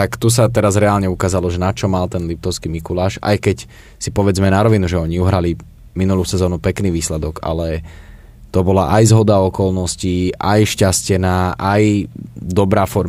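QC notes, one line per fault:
No technical faults can be heard in this speech recording; the signal holds steady across the clip with no dropouts, distortion, glitches or level disturbances.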